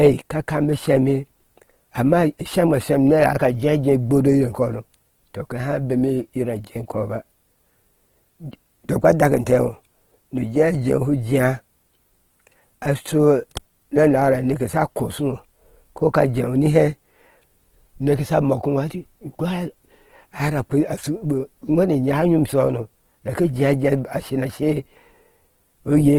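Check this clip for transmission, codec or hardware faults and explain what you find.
One codec fault runs through the whole clip: Opus compression, likely in its CELT music mode at a very low bitrate, consistent with roughly 16 kbps. Starved of bits, the encoder keeps each band's energy but fills detail with folded or noise content, so the speech sounds plainly rough, grainy and noisy, while the full bandwidth, reaching about 20.2 kHz, stays open.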